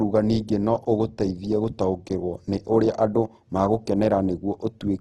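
From the start, the speech sounds plainly rough and grainy, with a hard ceiling at 12.2 kHz. This is likely Opus compression in its CELT music mode at a low rate near 16 kbps. The codec fills starved bands with folded or noise-like content instead of leaving holes. On a spectrogram, the upper bands look smeared and speckled, and everything above 12.2 kHz is blank.

Between 0.64 and 2.09 s, just before "nĩ ũrĩa andũ", eight CD scratch ticks fall at roughly five to six per second. A disc blemish defeats error correction on each revolution, so the player patches or mutes a few milliseconds of samples. The waveform shows brief spikes or notches, each up to about 3 ms, and the spectrogram shows thin vertical lines.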